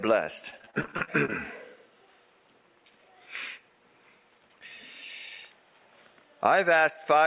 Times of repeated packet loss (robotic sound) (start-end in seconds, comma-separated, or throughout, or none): 0.50-1.33